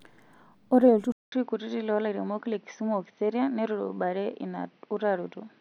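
At 1.12 s the speech drops out for about 200 ms, and when it returns it sounds duller and more boxed-in than before. From there to the end nothing reaches above about 6.1 kHz, and a faint new background noise sits well below the signal. The level stays much the same. The likely cause is the input switching to a poorer device partway through the recording, one with a narrower band and a noise floor of its own.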